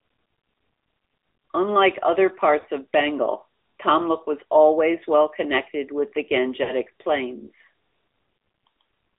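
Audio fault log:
throughout: AMR narrowband mobile codec. Buzzy, synthetic speech at a rate that fits roughly 10 kbps, with nothing above about 3.7 kHz or below 300 Hz. On a spectrogram, energy stops at a flat ceiling.
2.60–2.65 s and 6.64–6.72 s (after "well connected with the"): lost AMR speech frames. The decoder repeats stale pitch and vocal-tract settings at falling gain, producing a brief warbly dip that fits about two 20 ms frames. On a waveform, the envelope sags; on a spectrogram, the harmonics are smeared.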